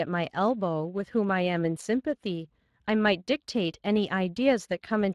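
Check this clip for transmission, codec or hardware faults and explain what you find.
One fault runs through the whole recording: Speex codec damage. From start to finish the speech sounds grainy and hoarse, with a hissy, artificial quality in the upper range. Speex is a CELP codec that models the vocal tract and encodes the excitation with a limited bit budget. At this middle setting, which fits a rate of about 22 kbps, the excitation is coarsely coded, producing that roughness, and the band above 8 kHz is replaced by shaped, noise-like fill rather than true detail.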